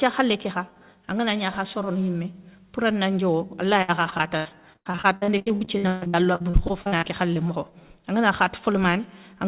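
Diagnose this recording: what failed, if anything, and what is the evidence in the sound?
Repeated packet loss (robotic sound) at the network stage, from 3.82 to 7.38 s. There are 31 gaps, the longest 140 ms, and about a third of that stretch is concealed by extending the previous sound, so the audio turns choppy with pieces missing. On a spectrogram, the concealed stretches show as frozen, smeared harmonic bands. The waveform has repeated, copied-looking cycles. All content stops at 4 kHz, which fits a narrowband G.711 call path.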